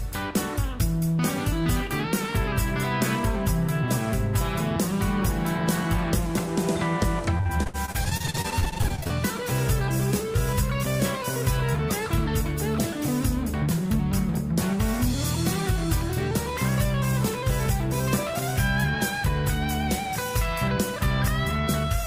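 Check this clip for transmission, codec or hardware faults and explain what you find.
One transmission fault stands out: repeated packet loss (robotic sound) from 7.37 to 9.11 s. Packets kept dropping or arriving late. Each short gap, the longest 61 ms, was patched by stretching the preceding sound, so about a third of that stretch turns choppy.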